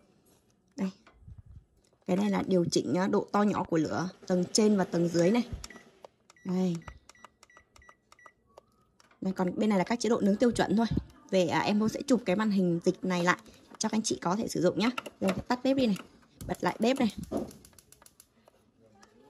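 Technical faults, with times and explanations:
3.56 to 3.68 s, loud pop: two sharp pops in quick succession stand out a few decibels above the sound, which carries on underneath. This is likely a sudden voltage step or pulse, from a plug, switch, static discharge or driver glitch, entering the signal path.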